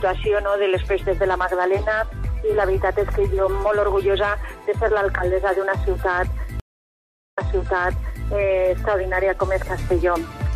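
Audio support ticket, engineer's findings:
Stream reconnect at 6.60–8.26 s. Playback drops to silence for 736 ms, then resumes 929 ms earlier in the stream, repeating material already heard. Server resent a burst after the connection broke. Fresh decoder start, first frame fades in.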